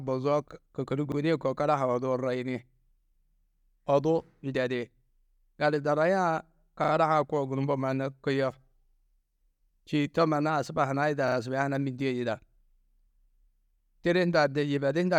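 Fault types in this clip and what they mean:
Repeated buffer: at 1.12, 6.84 and 11.28 s, late audio made the device replay a 40 ms piece once, then twice, giving hard-joined stutters.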